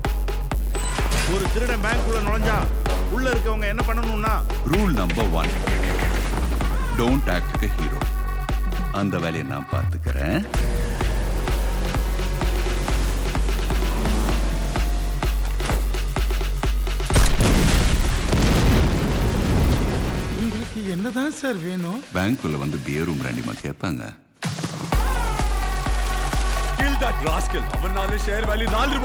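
A steady 100 Hz buzz runs under the sound for the whole clip, present only while there is signal. It comes from a resampler restarted on every block. Each 10 ms block was converted separately, which fits a 24 kHz to 48 kHz rate change, leaving a small error at every block edge.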